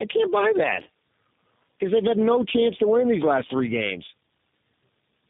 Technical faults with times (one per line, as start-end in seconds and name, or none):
0.00-5.29 tandem speech coding